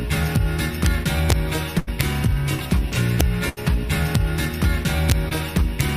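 Violent, harsh cracks hit the loud moments at 0.36, 0.86, 1.30–1.33, 2.01, 3.20, 4.15, 5.10–5.12 and 5.57–5.81 s. This is integer overflow, where peaks past the integer limit wrap to the opposite sign instead of being held. At 1.79–1.89 s and 3.49–3.59 s, the sound holds and fades for about 75 ms before resuming with roughly 80 ms missing. These are bursts of packet loss that the receiver concealed by extending the last audio. At 5.29–5.33 s, a brief smear marks short concealed packet loss, where a 20 ms fill covers audio that arrived too late.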